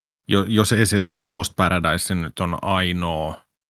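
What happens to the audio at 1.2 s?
At 1.2 s you're in the middle of a gap: right after "jos ei", around 0.97 s, the speech smears into a fading buzz, then goes silent for roughly 0.3 s, resuming at 1.41 s. That's a long network dropout, likely lost packets, and about 0.42 s of speech is simply gone.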